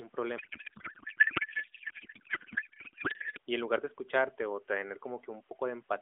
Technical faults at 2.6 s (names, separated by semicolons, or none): codec payload misread